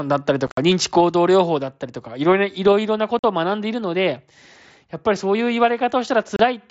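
At 0.47 to 0.58 s, 3.19 to 3.24 s and 6.36 to 6.40 s, the speech drops into abrupt holes. This is unconcealed Bluetooth headset packet loss: audio packets on the headset link never arrived, and silence or an idle pattern took their place. The first event is a chopped cluster whose longest gap is 60 ms. Concealed loss would smear the gaps over with repeated sound, but these stay as holes and have abrupt edges.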